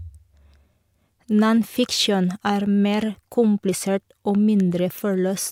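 Nothing in this bit of speech trips any alarms; there's simply no technical fault to point to anywhere along the way.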